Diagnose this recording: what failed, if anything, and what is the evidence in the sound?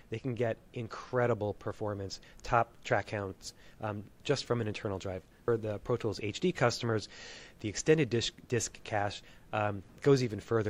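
No fault found in any stage.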